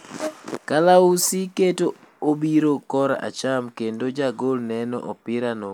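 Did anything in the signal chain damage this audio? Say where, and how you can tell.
No, nothing in the signal chain has damaged this speech recording. No stage from capture to playback leaves an audible trace on it.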